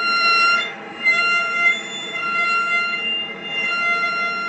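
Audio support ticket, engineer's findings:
No faults found in this one, just the ordinary character of a call path, with the top end rolling off around 8 kHz, which fits a wideband Opus setting.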